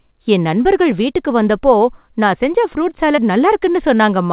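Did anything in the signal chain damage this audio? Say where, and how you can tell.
Yes. The network stage dropped audio. A short concealed packet loss hits at about 3.16 to 3.19 s, right after "வந்தப்போ நான் செஞ்ச ஃப்ரூட்". Around 20 ms of the call arrived too late for the jitter buffer, and the receiver patched roughly 14 ms of it by extending the preceding sound before crossfading back into real audio. You hear a brief smear or wobble there, sitting inside the telephone-band sound with nothing above 4 kHz, consistent with a G.711 mu-law call.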